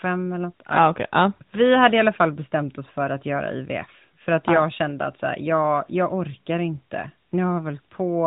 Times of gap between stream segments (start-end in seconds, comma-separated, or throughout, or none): none